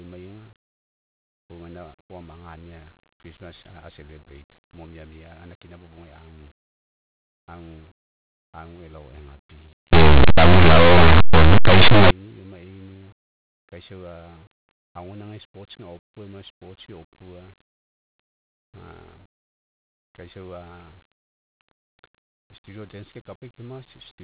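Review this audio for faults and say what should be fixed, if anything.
From 9.93 to 12.11 s, about 2.2 seconds, the speech turns into loud, harsh distortion. This is linear audio read as companded: plain linear 8-bit samples were decoded as though they were mu-law codes. Mu-law expansion treats the byte value as a compressed code, so samples sitting just to one side of zero come out as the largest possible values while those on the other side stay tiny. Quiet, low-level speech is therefore flung toward clipping. To prevent it, label the format explicitly and have the player take the linear or mu-law choice from that label rather than guessing.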